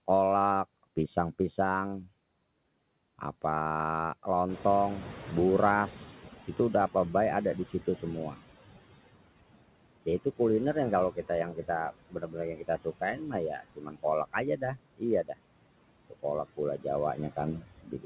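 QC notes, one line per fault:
Throughout, noise suppressor artifacts: between phrases the background is pulled down by about 18 dB, then rises again under speech. Per-frame band gains make the residue pump.
4.48 to 8.4 s, noise suppressor catching up: room noise jumps about 12 dB near 4.5 s. The lagging noise estimate cuts only about 13 dB at first, then takes 3.92 s to settle.
11.15 to 15.36 s and 17.16 to 18.05 s, speech cut by the noise suppressor: quiet speech was taken for noise and dropped up to about 19 dB and 17 dB. Roughly a second and a third of a second sound swallowed.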